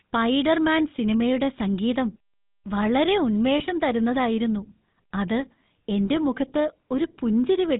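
GSM full-rate codec throughout: pulse-driven vocal-tract modelling, consistent with 13 kbps, cuts everything above 4 kHz and gives the speech a buzzy, gravelly roughness.

Lost GSM frames from 3.58 to 3.62 s, just before "തരുന്നതായിരുന്നു അത്": a gap of about one 20 ms frame is filled by repeating the previous frame, heard as a brief rough, metallic ring.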